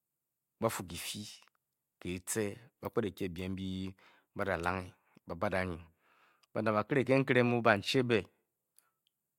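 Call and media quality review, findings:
Clock slip clicks, 0.12 to 9.37 s: faint steady ticking about every 50 ms under the speech, well over a hundred in all. Likely two unsynced device clocks, roughly 400 ppm apart, slipping one sample each time.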